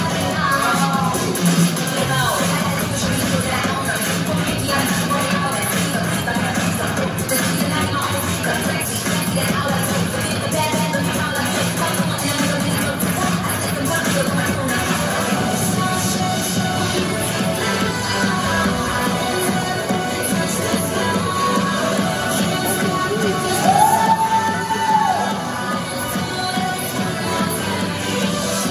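No technical faults can be heard anywhere in the audio. Nothing in it goes wrong at any point, so there is nothing to place on a timeline.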